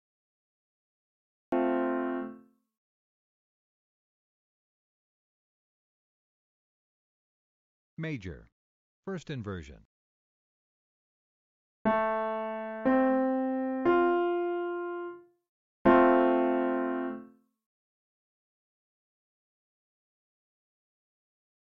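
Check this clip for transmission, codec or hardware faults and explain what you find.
There's one fault, a cut-off start. The first 1.52 s are dead digital silence, then the sound jumps in mid-stream at 1.52 s with no attack or fade. Capture or streaming began late, so whatever was already sounding gets chopped abruptly rather than starting naturally.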